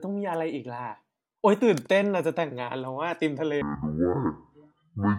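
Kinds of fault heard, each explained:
Section at the wrong speed: from 3.62 s to the end at 5.19 s the speech abruptly turns deep and sluggish, roughly ten semitones lower, because that stretch plays at 0.52 times its recorded speed, likely from being fitted to the wrong clock.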